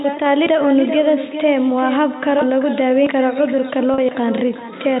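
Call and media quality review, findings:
Echo with no canceller, throughout: every phrase returns as a quieter, thinner copy about 10 dB down, roughly 0.4 s late. Far-end loudspeaker-to-mic path, no AEC. Discrete, delayed repeat, not the smooth decay of room reverberation.

Packet loss with pitch repetition, 3.94 to 3.98 s: 40 ms gap bridged by a briefly held, buzzy tone, then cross-fade back. Jitter buffer or network, fitting two 20 ms packets. Brief periodic buzz, not a click or dropout; G.711 band-limiting unaffected.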